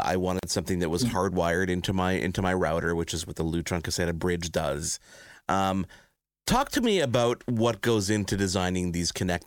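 At 0.39 to 0.43 s, a gap at a join of encoded pieces: a 40 ms gap with smeared edges, left by untrimmed encoder delay and padding, before "something that was".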